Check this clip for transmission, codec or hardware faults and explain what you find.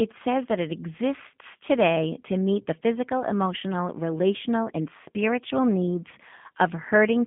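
One codec fault runs through the whole speech clip: G.729 coding, and the damage is plainly audible.

G.729 codec: the voice sits in a 150 Hz to 3.5 kHz phone band, with nothing above 3.7 kHz. Each 10 ms frame is rebuilt from a filter, a pitch predictor and a few pulses, giving a rough, synthetic buzz. That buzz, rather than clean narrowband dullness, separates it from simple low-pass filtering, and fits an 8 kbit/s G.729A stream.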